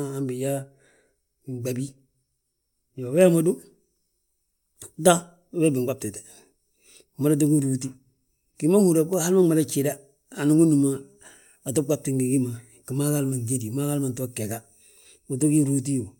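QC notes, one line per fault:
No faults heard; the speech runs without interruption or audible defect at any point.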